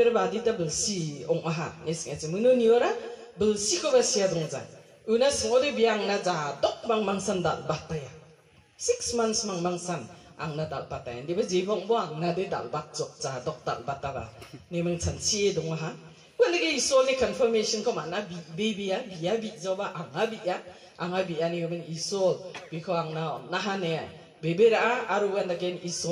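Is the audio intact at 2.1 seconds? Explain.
Yes, the audio at 2.1 seconds is intact, with no dropout, click, distortion or other fault present at that moment.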